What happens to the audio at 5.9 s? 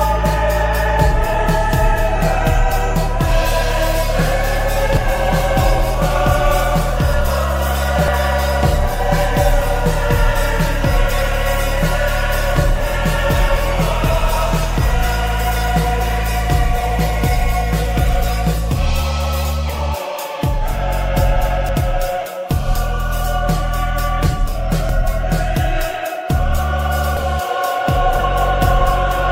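A dropped buffer (overrun) occurs at 5.94 s: the audio jumps abruptly forward, losing roughly 50 ms with no gap of silence. The likely cause is samples being overwritten before the program read them, splicing the surrounding audio directly together.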